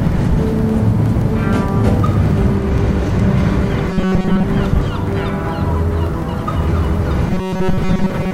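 Robotic sound from repeated short buffers appears from 3.90 to 4.44 s and again from 7.30 to 8.34 s. Both stretches turn rigid and metallic, locked to a steady buzz at 188 Hz. That is likely new audio arriving too seldom, with the last fragment of about 5.3 ms replayed to fill the gap. Most of the material in these spans is skipped, and the sound only loosely follows its original shape.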